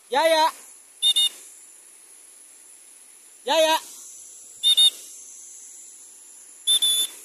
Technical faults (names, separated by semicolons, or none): none